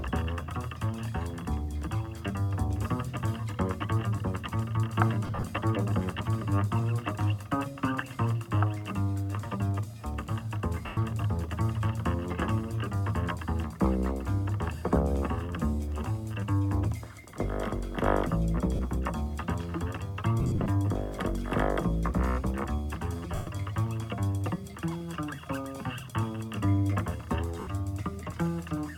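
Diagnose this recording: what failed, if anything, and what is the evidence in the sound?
Lost LE Audio frames on the Bluetooth link at 5.27, 10.86, 18.75, 20.40, 23.35 and 27.60 s. The LC3 decoder filled the 40 to 180 ms lost at each time with the last spectrum and scrambled signs, so the sound becomes a brief noisy smear.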